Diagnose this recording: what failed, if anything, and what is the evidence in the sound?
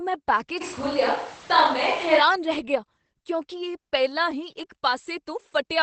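At the codec stage, the speech went through Opus voice compression in its SILK mode at a low rate, consistent with about 12 kbps wideband. Nothing survives above about 8.6 kHz, and coarse excitation coding leaves the voice plainly muffled, hoarse and faintly robotic throughout.

From 0.63 to 2.18 s the pickup changes abruptly, likely a switch to a distant microphone after the close one dropped out. The voice turns roomy and hollow with thinner bass and little change in level, and room noise rises to about 25 dB below the speech.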